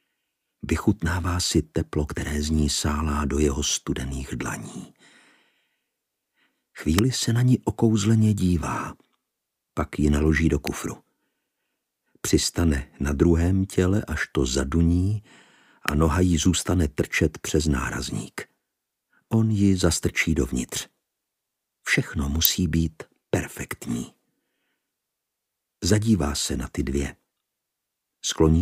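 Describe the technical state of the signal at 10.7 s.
At 10.67 s there is an electrical switching spike: a sharp snap peaking around -5 dBFS, likely a nearby switch or discharge arcing into the audio line.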